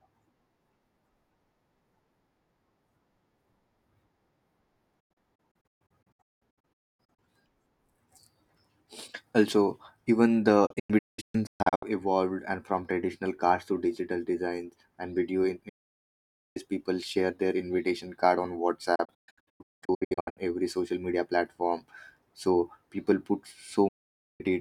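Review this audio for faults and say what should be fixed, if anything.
Digital broadcast dropout mutes the speech at 5.00–7.19, 10.66–11.83, 15.69–16.57, 18.95–20.38 and 23.88–24.41 s, where the receiver lost frames and silenced output, fading in 8 ms. The waveform shows flat gaps up to 864 ms long, and the spectrogram shows blank vertical bands. Stronger reception or better error protection would prevent this.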